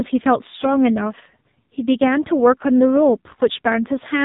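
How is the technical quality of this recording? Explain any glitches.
Quality is poor: the speech sounds muffled, buzzy and synthetic for the whole clip. This is the AMR narrowband mobile codec, which discards everything above 4 kHz and rebuilds the voice from a sparse vocal-tract model. The heavy damage fits a low mode of about 5.9 kbps.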